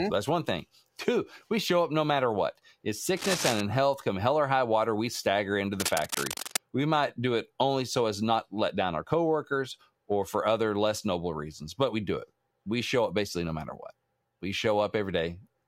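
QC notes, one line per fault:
3.17–3.61 s and 5.80–6.58 s, cable scratch noise: dense, uneven bursts of scratching sit almost as loud as the speech, likely from a worn lead or connector being moved. The irregular rustle lasting under a second sets it apart from isolated clicks or steady hiss.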